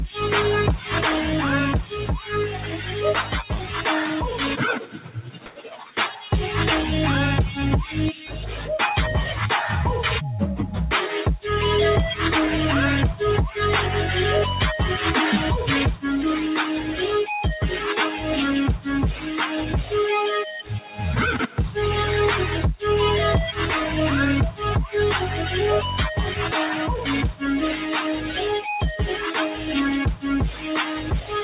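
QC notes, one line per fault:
Throughout: noise suppressor applied to music or sounds. A speech-tuned suppressor treats steady sound as noise, so level swings by about 5 dB within the narrowband, 4 kHz-limited call audio.
1.83–3.85 s, 4.79–6.28 s, 8.13–8.31 s, 18.78–19.27 s, 20.8–20.99 s, 28.18–28.38 s, 29.13–29.68 s, 30.16–31.32 s: sound cut by the noise suppressor. Held or decaying sound is judged as noise and pulled down by about 5 to 10 dB, so it sinks or its tail is shortened.
5.46–5.56 s: comfort noise in place of the background. For 100 ms the quiet background, about 27 dB below loud passages, turns flat and featureless, likely synthetic fill from discontinuous transmission.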